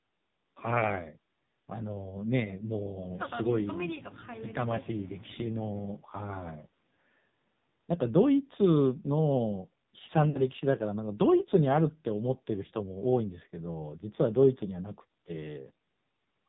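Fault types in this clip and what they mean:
AMR narrowband mobile codec: The speech was carried by the 2G/3G mobile speech codec, which samples at 8 kHz and rebuilds the voice from a vocal tract model driven by a few pulses in each 5 ms slice. Nothing above 4 kHz survives, so the clip sounds narrow and telephone-like. The heavy buzzy, synthetic colouring throughout points to one of the codec's lowest modes, fitting a rate of about 5.9 kbps.
lost AMR speech frames: Between about 10.30 and 10.48 s, speech frames arrived corrupted and failed their checks. The decoder filled the gap by repeating the last good pitch and vocal tract settings at falling gain. The loss is about 40 ms, which fits two consecutive frames. It is heard as a brief smeared, drawn-out warble that sags in level, after which the speech comes back weak or rough for a moment.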